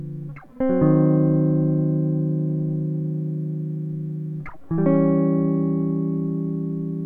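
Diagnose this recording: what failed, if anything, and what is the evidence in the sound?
Nothing failed here as far as I can hear: the music runs along without a single stumble at any stage of the chain.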